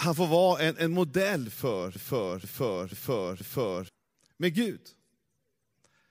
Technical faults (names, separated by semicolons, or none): broken-record loop